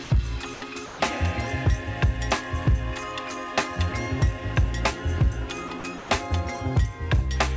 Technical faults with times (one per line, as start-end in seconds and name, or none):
0.04-0.10 sound dropped by the voice detector
0.54-1.00 sound dropped by the voice detector
5.68-6.10 sound dropped by the voice detector